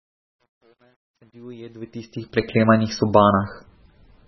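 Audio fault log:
throughout: MP3 compression, heavy. The speech has nothing above about 5.9 kHz, so it sounds dull and boxed-in, and the consonants come out watery and swirly, with chirpy, metallic edges on the s sounds. When bits run this short, the encoder cuts the treble at a fixed frequency and drops the weak frequency lines, and those lines flicker on and off from frame to frame. The damage is consistent with a very low bitrate, likely around 16 kbps.
0.00 to 2.57 s: truncation distortion on a fade. The fade-in rises from a low level at the start to full level at 2.57 s, and its quiet stretch is gritty rather than clean, worst from 0.00 to 1.87 s. The gain stage that made the fade kept only about 10 bits and added no dither. At low level the waveform collapses into a few coarse square steps, which turns the faint opening into rough, gritty sound.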